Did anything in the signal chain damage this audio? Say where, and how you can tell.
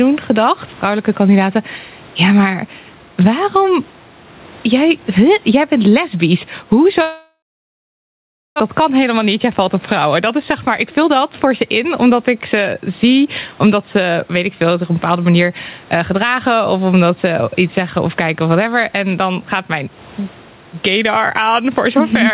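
Yes. Throughout, the gain swings by around 10 dB, pulling down on each loud syllable. That's gain pumping, likely from the input gain being set far too high and a fast limiter clamping down.

After "jij jij bent lesbisch", from 7.02 to 8.62 s, the sound smears into a fading buzz and then goes silent for about 1.17 s. It resumes with roughly a second missing. That's a long network dropout, likely packets not arriving, with the receiver concealing the gap.

From 8.70 to 13.26 s, leading into "omdat ze weet ik", the speech runs at 112% speed with the pitch unchanged. That's a jitter buffer speed-up, trimming pitch periods to shed around half a second of backlog.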